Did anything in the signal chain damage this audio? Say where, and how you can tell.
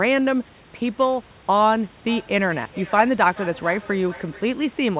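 Yes. The damage comes from call processing. From 2.08 s to 4.6 s the speech returns as a delayed copy, repeating roughly every 0.4 seconds. The repeats sound thinner and more ringing than the original. At their loudest they sit about 18 dB below the speech. This is feedback echo between two devices. A second device in the room plays the far end's audio back into a microphone. Each device's echo canceller removes only its own playback, so the loop survives. The call path's cutoff at 4 kHz points to a narrowband telephone codec.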